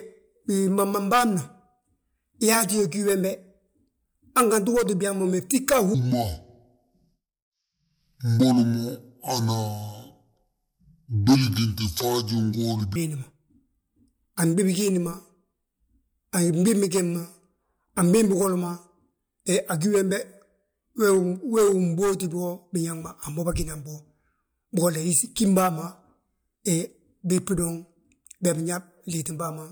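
From 5.94 s to 12.96 s, a section plays at the wrong speed. The speech runs at 0.606 times its recorded rate. Pitch and tempo fall together, roughly ten semitones, so the voice turns deep and slow. A mismatched playback clock is the likely cause.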